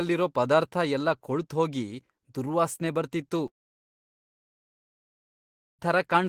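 At 3.47 s the speech breaks into a brief fading buzz that drops to near silence, lasting about 2.3 s until 5.81 s, where sound resumes with the middle portion gone. This points to a long network dropout, likely where audio stopped arriving and the receiver could only fill the gap.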